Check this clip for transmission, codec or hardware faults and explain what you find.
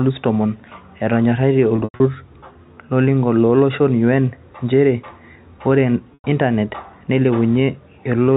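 Two bursts of packet loss with pitch repetition interrupt the speech. From 1.76 to 2.00 s, about 180 ms is lost in pieces over 240 ms, with the longest run 100 ms, which fits 20 ms packets. At 6.14 s a single 100 ms gap follows. The receiver loops the last pitch period and fades it over about 50 ms, so each gap is a held, buzzy tone sinking toward silence before speech cross-fades back. A plain dropout would cut straight to silence instead.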